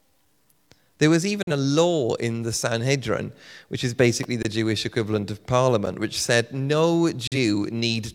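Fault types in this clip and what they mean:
digital broadcast dropout: The receiver muted for a frame it couldn't decode, so speech dips out with a 3 ms fade at 1.43 s and again after "which said no" at 7.27 s, each about 43 ms long.
electrical switching spike: A sharp snap right after "which is" at 4.23 s, lasting about 11 ms on top of the speech, likely an arc from a nearby switch or static discharge.
block of digital silence: Sound cuts out and back with no fade: 21 ms at 4.43 s and 11 ms at 5.86 s between "equivalent of" and "which said no".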